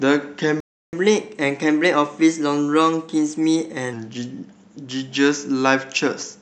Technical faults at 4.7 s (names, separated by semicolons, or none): none